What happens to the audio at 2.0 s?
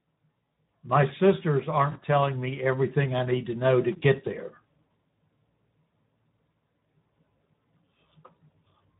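Just before 2.0 s, from 1.91 to 1.99 s, there is VoIP packet loss concealed by the speech codec. About 40 ms of audio went missing. The decoder filled the gap by repeating its last pitch and filter at falling gain. The speech smears into a buzzy tone or coloured noise that fades, and it stays weak for a moment after the gap.

Around this point, as across the whole clip, Speex codec damage is plainly audible. The coding sounds consistent with a bitrate near 11 kbps, which leaves few bits for the excitation. The speech therefore sounds noisy and hoarse. Any high-frequency content is a shaped noise fill rather than real detail.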